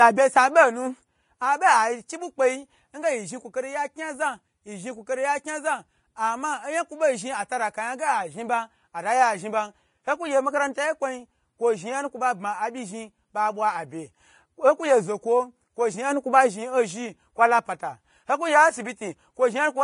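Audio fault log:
throughout Vorbis compression: likely low-bitrate Vorbis coding cut everything above 10.5 kHz and coarsely quantised the treble into plainly audible grainy hiss, fitting about 31 kbps.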